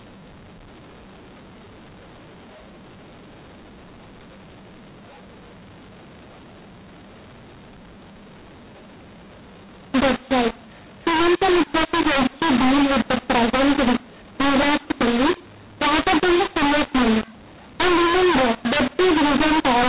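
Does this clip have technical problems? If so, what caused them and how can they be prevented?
Yes. The speech throughout has a mu-law and A-law mix-up. It was coded with G.711 A-law but decoded as mu-law. Sample levels come out scrambled. The speech sounds harsh and distorted, and pauses fill with noise. Prevent it by making both ends agree on the same G.711 law.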